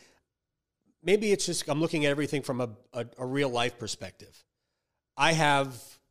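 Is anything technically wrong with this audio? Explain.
Yes. At 4.82 s new data failed to reach the audio device in time, so it replayed its last buffer three extra times, a repeated buffer fault. The 1.45 ms piece, which fits a 64-sample buffer, sounds four times with hard joins. In the speech this is a tiny click or brief buzz rather than a stutter, and almost no audio is lost.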